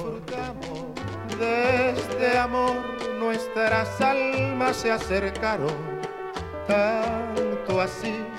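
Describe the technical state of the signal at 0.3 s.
At 0.3 s the sound is heard twice: a dry, full-band copy trails roughly 0.7 s behind, about 5 dB quieter. This doubled audio track runs from the start to 2.38 s, then stops abruptly, likely because a second, slower capture path is mixed in.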